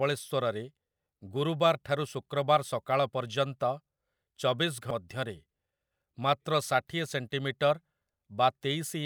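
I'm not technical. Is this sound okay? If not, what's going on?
No. At 4.91 seconds there is a brief glitch in the speech. This is damaged data in a compressed stream. Part of the stored file got corrupted there. The player could not read that bit, lost its place, and skipped to the next readable chunk.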